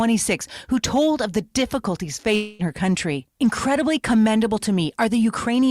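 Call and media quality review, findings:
Hard clipping, whole clip: crackle on loud speech peaks from overdrive of about 3 dB, with roughly one percent of samples pushed past full scale. Probable component is the capture gain or converter stage. Peaks are cut flat, so the waveform shows squared-off tops, and the spectrogram shows vertical smears of high-frequency harmonics at each loud syllable.

Long network dropout, 2.35 to 2.62 s, after "told of the difficulties" and before "her country": about 240 ms of audio missing, likely from lost packets. The receiver papers over the gap for about 237 ms, stretching the last sound into a fading buzz or hiss with no true silence. Speech resumes at "her country" with the lost part gone. On the waveform there is a decaying, repetitive smear, and on the spectrogram a blurred band with no speech structure.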